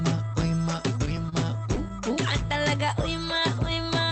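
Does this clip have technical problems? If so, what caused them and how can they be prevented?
Yes. From 1.05 to 1.91 s, repeated stalls (stutter): late packets kept emptying the jitter buffer, so seven brief hitches, none over 25 ms, stretch the sound by about 80 ms. A larger adaptive jitter buffer and a steadier, less congested network path would prevent this.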